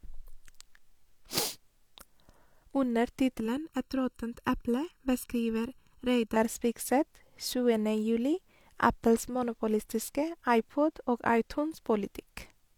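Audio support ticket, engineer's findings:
Channel delay (comb filtering), 3.40–6.36 s. Speech turns hollow, phasey. One channel lags by under a millisecond; mono sum cuts notches from around 700 Hz upward.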